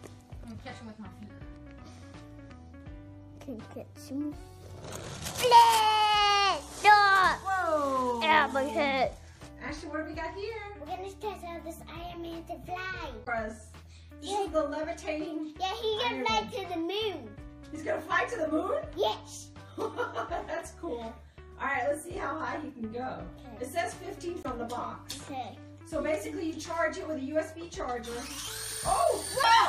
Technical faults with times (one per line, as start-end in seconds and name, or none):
0.00-29.69 MP3 compression
5.26-5.80 cable scratch noise
13.23-13.28 damaged data in a compressed stream
24.41-24.46 damaged data in a compressed stream
29.40-29.45 damaged data in a compressed stream